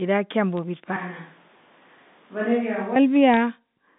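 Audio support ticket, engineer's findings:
Bit errors on a digital phone line. Sharp isolated ticks at 0.57 s and in a short cluster at 3.34–3.37 s. Component: the G.711 A-law transmission path, whose 150–3700 Hz band is heard intact around the hits. Mechanism: flipped bits corrupt single samples; sign or high-bit hits jump the waveform. The error rate sounds like roughly a tenth of a percent. Distinguishing: speech underneath is unchanged, with no gap or muting, so this is not packet loss or a dropout.

Switch to a distant microphone, 0.96–2.96 s. Abrupt change to roomy, hollow sound with thinner bass. Level drops by about 5 dB, and room noise rises to about 30 dB below speech. Likely cause: the close mic's feed failed and a farther pickup took over. Distinguishing: the onset and the return are both sudden, the telephone bandwidth stays the same, and reverberant tails are added. This is an acoustic pickup change, not a codec or filter change.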